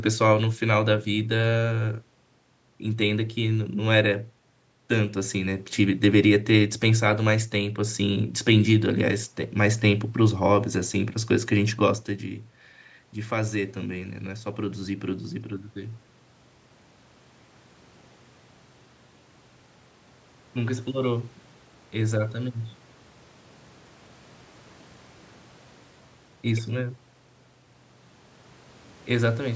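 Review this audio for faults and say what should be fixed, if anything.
From 12.2 to 16.04 s there is automatic gain rising. The level at the microphone fell by about 12 dB after the talker moved back, roughly at 11.5 s, and the gain control climbed about 5 dB over nearly four seconds to compensate. Unlike the talker simply moving closer, the room noise swells along with the voice, because the whole input is being amplified. A slower or capped gain control, or a steadier microphone distance, would prevent it.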